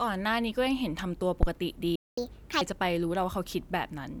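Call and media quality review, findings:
Phantom power thump, 1.43 to 1.48 s: deep low-frequency bump under the speech, decaying in about 12 ms. Supply switched on or off on a live input; step passes through the coupling capacitors. Waveform: asymmetric offset spike. Spectrogram: brief broadband column, heaviest at the bottom.

Playback stall, 1.95 to 2.18 s: speech cuts out for about 218 ms, then resumes. Likely player buffer underrun or blocked audio thread. Waveform: flat silent gap. Spectrogram: blank vertical band with hard edges.

Catch-up at higher speed, 2.18 to 2.61 s: speech runs at 1.5× speed, pitch raised roughly seven semitones. Player resampling its backlog to recover lost time. Spectrogram: harmonics shifted upward, compressed in time. Waveform: denser cycles.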